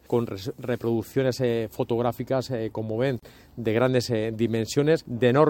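From 3.19 to 3.23 s, a gap at a join of encoded pieces leaves 32 ms of untrimmed encoder padding: a brief dropout, a blank spectrogram stripe.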